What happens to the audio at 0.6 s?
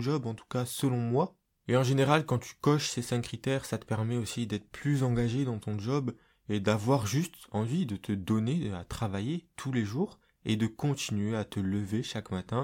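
Nothing goes wrong at 0.6 s: the speech plays through that moment intact, with no dropout, click or distortion.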